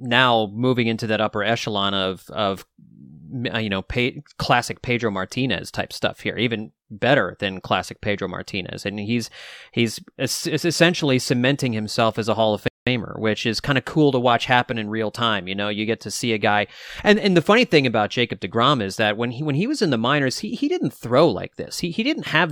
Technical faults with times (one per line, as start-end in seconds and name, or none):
12.68-12.87 rebuffering stall